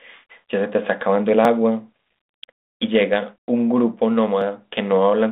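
Brief skips at 1.45, 2.44 and 4.42 s are audio missing between chunks, roughly 10 ms each, spliced without silence. Their spacing on a one-second grid likely reflects losses at chunk boundaries.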